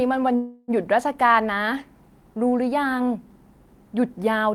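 From 0.35 to 0.71 s, a call audio freeze stretches the last sound into a fading buzz, likely from late packets. Unlike a dropout, speech resumes intact, just 0.33 s late.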